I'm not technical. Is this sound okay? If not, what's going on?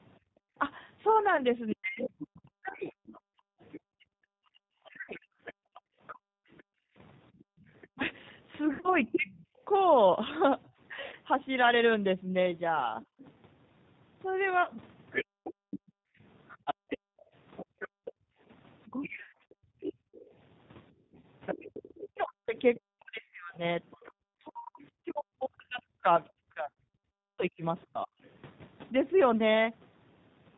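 No. The speech throughout sounds slightly rough, thin and a bit synthetic, like an older phone line. That comes from the G.729 codec, a phone-call compression system that rebuilds the voice from a simplified model of how speech is produced, sending only small chunks of information every few thousandths of a second. It also drops everything above about 4 kHz, so the crisp, airy part of the sound is missing.

From about 0.19 s to 24.16 s, the quiet room sound behind the speech keeps dipping or vanishing, adding up to roughly five seconds in total. That is the background gated by the echo canceller. Whenever the far end's loudspeaker was playing, the call software turned the microphone sharply down so the loudspeaker wouldn't echo back, then let it up again.

Short glitches, where the sound briefly smears into a buzzy or hissy tone and then fades before recovering, occur at 1.37, 5.02, 8.66, 11.06, 14.63, 19.15, 21.2 and 26.72 s. 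This is VoIP packet loss concealed by the speech codec. Pieces of the call never arrived, and the decoder filled the gaps by stretching out the last bit of voice it had. The ones at 8.66 and 19.15 s are the longest and choppiest, with several gaps close together.

Between about 1.73 and 9.28 s, around 15.3 s, and from 18.88 to 28.13 s, the voice itself sometimes drops sharply or cuts out in pieces. This is likely speech suppressed in double talk. When both sides talked at once, the echo canceller couldn't tell the talker from the echo and turned everything down.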